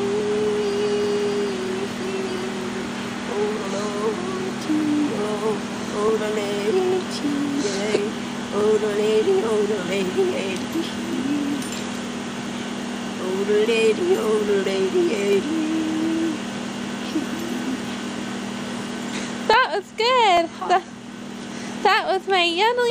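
Clock drift buffer slips, 0.2 to 22.9 s: a click every 0.84 s, likely from mismatched device clocks making the buffer drop or repeat a few samples.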